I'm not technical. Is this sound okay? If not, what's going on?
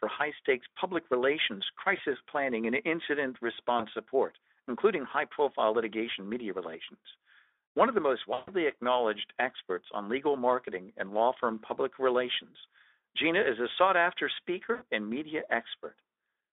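No. The speech has VoIP packet loss concealed by the speech codec, at 1.97–2.01, 3.77–3.83, 8.33–8.50 (after "of the most") and 14.73–14.83 s. Bits of the call went missing. Instead of falling silent, the phone guesses, stretching the last sound into a brief buzzy or noisy, fading smear.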